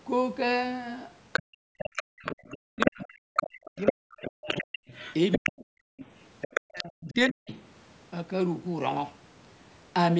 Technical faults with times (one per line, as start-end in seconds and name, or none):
1.33-7.30 other side's voice leaking through
1.59-4.80 speech suppressed in double talk
5.37-5.66 speech suppressed in double talk
5.94-5.98 background gated by the echo canceller
6.66-7.51 speech suppressed in double talk